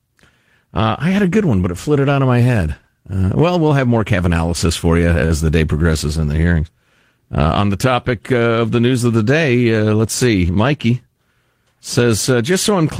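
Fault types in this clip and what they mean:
Short stall from a late packet, 5.25 to 5.32 s: A packet arrived after its playout time, so the jitter buffer ran dry and the receiver held the last sound for about 50 ms instead of skipping ahead. When the packet turned up, playback resumed exactly where it left off, so no speech is lost. The stretched sound lingers slightly too long, and everything after it plays about 50 ms later than before.
Jitter buffer speed-up, 10.49 to 11.09 s: Here the buffer held more speech than its target, and the receiver worked the excess down by cutting out many tiny pitch-period-sized pieces in quick succession. Over this stretch it dropped roughly 70 ms in total, so the speech plays at about 110% speed. The pitch stays the same, but the delivery sounds hurried until normal pacing returns.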